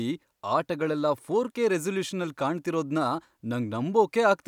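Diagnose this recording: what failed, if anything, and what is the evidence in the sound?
No faults detected in this recording.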